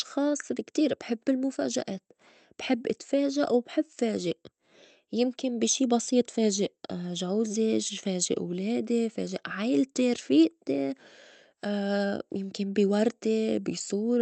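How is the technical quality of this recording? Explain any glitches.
No glitches stand out anywhere in this speech recording.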